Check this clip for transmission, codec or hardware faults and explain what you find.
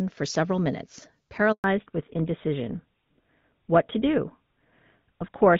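Two faults, back to back, both landing right after "for several minutes" in this speech clip.

First, a handover gap from 1.52 to 1.64 s. The call jumps from one network to another, and for about 120 ms no speech frames get through. The voice dies off almost instantly and you hear dead silence until the new link picks up, so whatever was said in that stretch is simply gone rather than garbled.

Then, from 1.64 s to the end, there's a fallback to narrowband. Before the switch the call is running HD Voice over the AMR wideband codec, which sounds fairly clean at a rate that fits 12.65 kbit/s, with only light coding roughness. After the handover the new link carries an older narrowband codec, most consistent with GSM full rate at 13 kbit/s. Nothing above 4 kHz survives, so the voice turns duller, loses its crisp consonants, and picks up a rougher edge.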